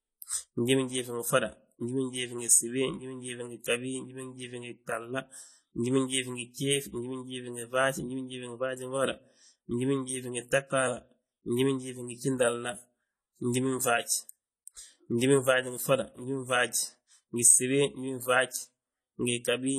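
From the start right through to the end, this speech carries a steady layer of codec damage that's plainly audible. There's nothing above about 14.1 kHz, so the top end sounds dull. Sibilants come out smeared and fizzy, with a warbly texture on sustained sounds. That's what you'd expect from AAC compression at a low bitrate, likely AAC-LC at something around 32 kbps, where the encoder drops high frequencies and coarsely quantises what's left.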